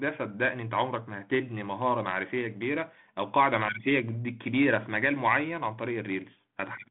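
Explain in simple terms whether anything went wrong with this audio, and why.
Nothing went wrong with this speech recording. It has come through a G.726 ADPCM telephone link, which keeps only a phone line's narrow band of about 150 Hz to 3.4 kHz, so the speech sounds a little thin and carries a slight roughness from the coding, as is normal for that kind of line.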